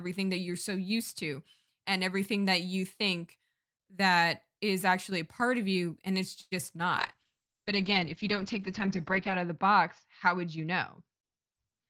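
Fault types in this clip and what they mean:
Short stall from a late packet: At 6.41 to 6.53 s a packet arrived late and the jitter buffer ran dry, so the receiver stretched the last sound for 99 ms and then resumed at the same point. No speech is lost, but one sound is held too long, adding 99 ms of delay. On a spectrogram the harmonics run flat and unchanging for that stretch, and the waveform shows a repeated periodic cycle.
Call bitrate drop: From 7.00 s to the end the encoder was forced from 32 kbps down to 8 kbps, staying at its lowest for 2.36 s, so the speech becomes coarse, watery and muffled. The audio bandwidth shrinks from 20 kHz to 8 kHz. A spectrogram shows a hard ceiling where everything above 8 kHz vanishes, with blotchy, smeared energy below it. The waveform looks much the same in level, since the damage is mainly in spectral detail.
Jitter buffer speed-up: From 11.22 to 11.87 s the buffer held more audio than its target, so the receiver trimmed short pitch-period-sized pieces again and again, removing roughly 70 ms and playing the speech at about 111% speed. 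The pitch stays the same, but the delivery sounds hurried. On a spectrogram the harmonic spacing is unchanged while syllables are compressed in time, and the waveform shows whole cycles cut out with no visible gaps.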